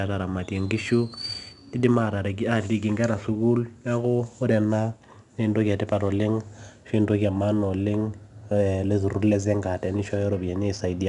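Speech, with 4-bit ADPCM compression throughout. Each sample is coded as a coarse step from a prediction, so a gritty hiss rides on every loud sound. Sharp attacks distort. Nothing sounds above 10.7 kHz, which fits a sample rate near 22 kHz.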